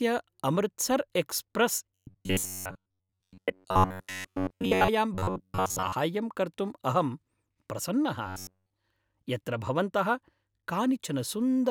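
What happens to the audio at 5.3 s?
From 5.15 s to 5.92 s the speech turns into a rigid, metallic buzz pitched near 94 Hz, still loosely tracking the words. This is robotic sound from repeated short buffers, likely caused by audio arriving too seldom: to fill the gaps, a slice of roughly 10.7 ms is replayed over and over, and those repeats cover most of the span while the real audio in between is skipped.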